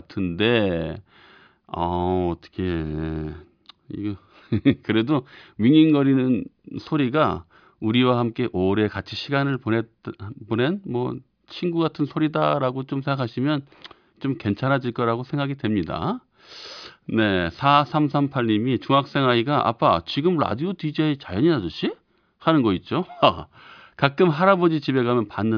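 Nothing stood out as a technical problem on listening to this speech recording.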